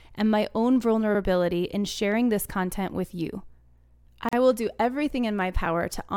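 Right after "and my own", at about 1.15 to 1.20 s, and again after "this content with you" at 3.70 to 3.75 s, there's a small stutter from overlapping chunks. The audio was handled in 2.5-second pieces that each start 50 ms early, so that sliver plays twice at each join.

Then at 4.29 to 4.33 s, just before "will do everything", there's a gap at a join of encoded pieces: a 41 ms hole with its edges smeared by the codec. Separately encoded segments, apparently about 6 s long, were stitched together with their encoder delay and padding left in, and the speech resumes where it stopped.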